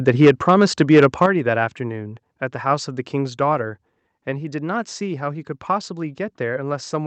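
Microphone overload runs from 0.07 to 1.26 s. The loudest syllables carry a harsh, crackling edge because their peaks are flattened. The input was likely driven about 6 dB past what the converter could represent, so a few percent of samples were clipped. The squared-off tops add dense distortion that rides on every strong syllable in this stretch and stops once the level drops.

Microphone volume stepped down twice, at 0.25 s by about 2 dB and at 1.26 s by about 7 dB. Each is a sudden one-step fall in level that hits voice and background alike. The likely cause is the call software reacting to the distorted peaks by cutting the device's input gain. The larger second step coincides with the end of the clipping. The audio then continues through a call codec whose band limit near 8 kHz fits Opus wideband coding.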